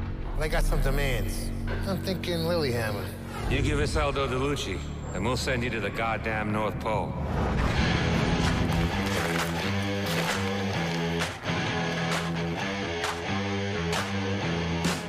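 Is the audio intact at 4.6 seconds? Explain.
Yes, the audio at 4.6 seconds is intact, with no dropout, click, distortion or other fault at that moment.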